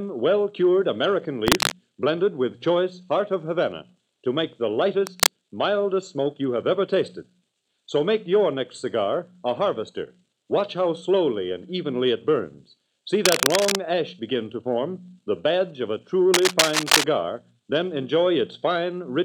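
Cable scratch noise appears four times, at 1.47–1.72 s, 5.07–5.30 s, 13.17–13.78 s and 16.34–17.04 s: short stretches of dense, uneven crackling and rustling laid over the sound, roughly as loud as the sound itself. The likely cause is a worn cable, connector or control being moved, so its contact resistance jumps about rapidly and injects bursts of noise. The last two episodes run longer, around 0.6 to 0.7 s each.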